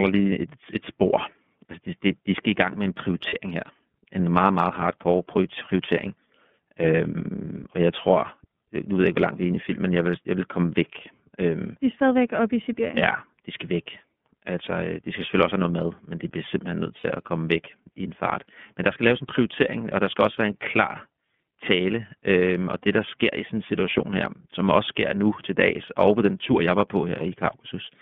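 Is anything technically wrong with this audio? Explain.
Yes, there are two problems: the whole clip is carried by the iLBC codec, and two short stretches have lost iLBC frames.

iLBC codec: throughout the 28-second speech clip, the band is narrowed to roughly 150 Hz to 3.5 kHz. iLBC codes each frame's excitation independently, and the sound fits its 13.33 kbps, 30 ms frame mode. The codec damage is plainly audible as a rough, somewhat synthetic quality, with no high-frequency content.

Lost iLBC frames: at 3.29 to 3.34 s, after "i gang med en", and at 16.97 to 17.05 s, between "de bliver simpelthen nødt" and "at komme væk i". The gaps last about 30 ms and 60 ms, which fits one and two lost frames. The decoder fills them by repeating the last pitch cycle with added noise, producing a brief, slightly buzzy held vowel. Normal speech returns immediately afterward.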